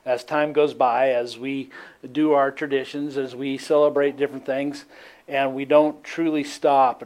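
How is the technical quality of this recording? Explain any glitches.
No glitches or faults detected.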